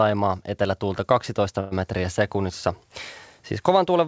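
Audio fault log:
1.60–1.74 s, call audio freeze: the sound stalls and the last fragment carries on as a fading buzz for about 0.11 s, then resumes at "metriä sekunnissa". This is likely a jitter-buffer underrun, so nothing is lost, but everything after runs 113 ms late.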